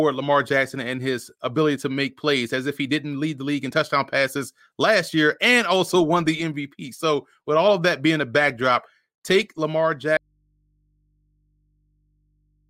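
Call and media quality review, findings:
Speech cuts off abruptly at 10.17 s and never returns; to the end only mains hum remains, roughly 45 dB below the speech. Audio dropout to a faint residue. Likely a lost source upstream, leaving the input open and picking up hum.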